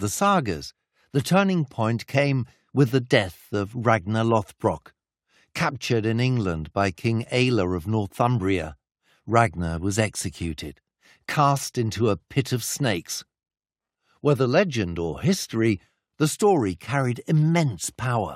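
No technical faults detected.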